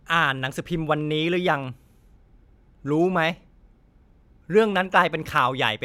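From 0.39 s to 5.38 s the speech carries a regular click. It returns every 0.62 s, about ten times in all. This pattern is clock drift buffer slips. Two devices likely run on separate clocks that disagree by a few hundred parts per million. The buffer between them creeps until a few samples, around seven, are dropped or repeated. Each slip is a jump in the waveform, heard as a tick.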